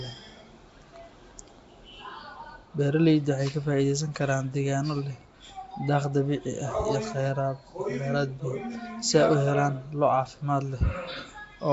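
Speech runs the whole clip with plainly audible coding damage: a rough, hissy halo around the voice, a smeared, underwater quality, and nothing above 7.7 kHz. The likely cause is Nellymoser compression, the old Flash microphone codec, at a rate that fits about 32 kbps. Unlike generic low-bitrate swirl, the hiss here is noise substituted into weak bands that received no bits, so it sits inside the voice rather than beside it.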